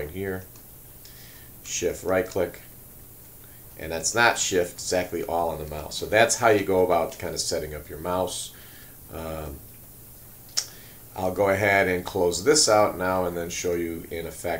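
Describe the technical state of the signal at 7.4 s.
At 7.4 s the signal is running at low bit depth with noise shaping, as it does throughout the clip. The audio has been reduced to 8 bits, and the rounding error from that coarse quantisation is fed back so that most of it is pushed toward the high frequencies. The result is a steady, thin hiss sitting roughly 20 dB below the signal, climbing sharply toward the top of the band.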